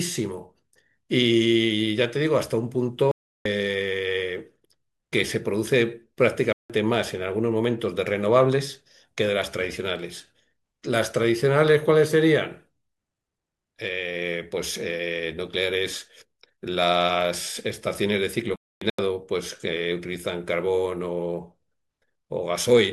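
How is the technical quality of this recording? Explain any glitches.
The speech is marred by three dropouts. Corrupt frame muted at 3.11 to 3.46 s, 6.53 to 6.70 s and 18.48 to 18.99 s: damaged compressed frames were rejected by the decoder and replaced with silence, so each hole cuts in abruptly and timing stays intact. The gap lengths point to frames of roughly 85 ms.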